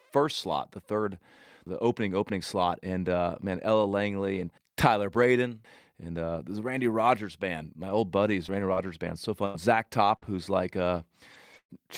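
Between 7.85 and 9.56 s, several packets arrived late or not at all, scattered through that stretch. This produces scattered short gaps, about four of them, the longest around 100 ms. The receiver covered each hole by extending the sound that came just before it, so the audio stays clear but is marked by brief ticks, smears and hiccups where roughly a tenth of a second and a half of material was papered over.

From 10.16 to 10.24 s, a burst of packet loss took out about 60 ms in a row. The receiver stretched the preceding sound across 56 ms of it, letting it fade, so a short held or decaying tone replaces what was there before playback resumes further on. The final 20 ms of this stretch, 10.22 to 10.24 s, was lost packet rebuilt from error correction. The following packet carried a low-bitrate copy, and that copy sounds rougher and noisier than the surrounding audio.

The same in-band recovery happens again at 11.34 to 11.36 s and at 11.54 to 11.56 s. 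Each is a single 20 ms frame played from the backup copy rather than the original, so there is no gap, only a momentary grainy patch.

A second burst of packet loss follows from 11.58 to 11.71 s, removing about 120 ms. Concealment extended the last sound for 117 ms, but it faded out, with about 70 ms of that fill near silence, before the audio picks up again with the intervening part missing.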